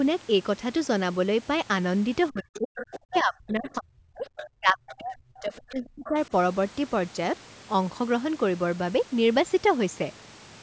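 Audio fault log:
2.30–2.74 s, 3.01–4.27 s and 4.56–6.15 s: speech suppressed in double talk. The talker's level sinks by up to about 40 dB in uneven pieces, likely because the echo canceller treated simultaneous talk as echo. On a spectrogram, the harmonics fade or vanish in patches, and the waveform shows sudden dips.
2.54–2.58 s, 2.76–2.99 s, 4.37–4.48 s, 4.89–4.95 s and 6.05–6.09 s: other side's voice leaking through. Brief scraps of a second voice, about 15 to 20 dB below the talker, are likely residual loudspeaker echo the canceller left in. They show on a spectrogram as faint harmonic fragments.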